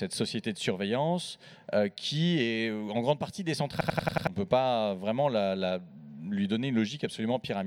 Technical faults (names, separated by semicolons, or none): system hang loop